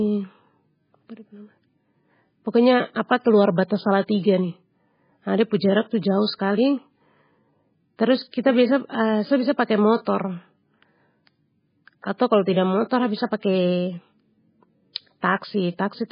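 MP3 compression, throughout the speech: the treble stops sharply at 5 kHz and weak detail flickers in and out, giving a watery, swirling texture. This heavy damage is likely from an MP3 encode starved of bits, which fits a rate near 16 kbps.

Pre-echo, at 10.05 s and again at 12.18 s just before "kalo tidak": a short hiss runs about 18 ms ahead of each sharp onset. The codec spread noise meant for the loud attack across its whole block, so it leaks into the quiet gap before it and softens the attack.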